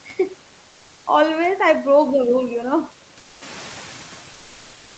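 Speech, with noise suppressor artifacts running the whole way through: the suppressor pulls the steady background down by about 9 dB, so the noise dips between phrases and comes back up underneath the talking. From 0.69 to 1.05 s there's comfort noise in place of the background. For those 360 ms the real room sound is swapped for a flat, featureless hiss, about 2 dB quieter, most likely because the sender stopped transmitting during the pause (discontinuous transmission) and the receiver filled the gap with synthetic noise. Then at around 3.5 s the room noise jumps by about 11 dB, and you can hear the noise suppressor catching up from 3.41 to 4.10 s. The new noise comes through fairly raw at first and then sinks by about 7 dB over those 690 ms as the suppressor's noise estimate adapts.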